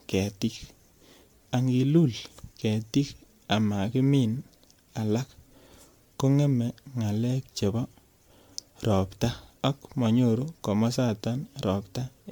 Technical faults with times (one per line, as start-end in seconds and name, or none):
0.00-12.31 generation loss